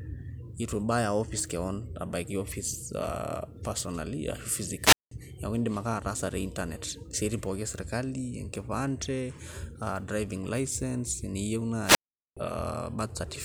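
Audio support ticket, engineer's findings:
Wireless microphone squelch dropout, twice. 4.80–5.11 s, mute 190 ms. 11.83–12.37 s, mute 417 ms. Hiss swells, then a hole of near silence, then speech resumes. Component: analogue FM wireless link. RF level fades, receiver squelch gates the output.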